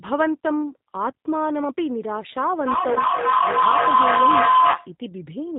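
From the start, the speech carries plainly audible G.729 codec damage: a slightly rough, synthetic quality, because the decoder rebuilds each 10 ms frame from a vocal tract filter, a pitch predictor and a few pulses. A spectrogram shows nothing above 4 kHz, which fits the 8 kbit/s G.729A variant.

At 2.66 s a feedback howl begins. Sound is circling from a loudspeaker back into a microphone on the same call, gaining level on each trip. It narrows to a tone around 1 kHz, pulsing roughly every third of a second, and peaks about 8 dB above the speech before stopping at 4.96 s. On a spectrogram it appears as a bright horizontal line, and the waveform envelope swells in regular beats.

Within the howl, VoIP packet loss concealed by the speech codec occurs twice: a 20 ms gap at 2.94 s and a 40 ms gap from 4.70 to 4.77 s. These fit one and then two lost packets. The decoder extended its last pitch and filter at falling gain, so each gap becomes a brief buzzy, fading smear. 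A spectrogram shows it as smoothed, repeated harmonics, and the waveform as a short, decaying, overly regular stretch.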